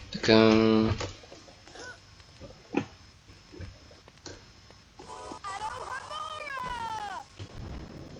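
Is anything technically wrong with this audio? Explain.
Yes, two things. First, overlap between stream segments at 1.35, 3.33, 5.32 and 7.30 s, one every 2 s. The segment time stamps overlap and the player trims away 20 to 40 ms that wasn't actually repeated, so the waveform jumps and you hear a small skip.

Second, periodic USB or driver dropouts from 5.59 to 8.09 s, spaced 0.1 s apart. Something keeps stalling the bus or driver, and each time around 10 ms gets replaced with silence, about thirty times in all, giving an even run of ticks or pops.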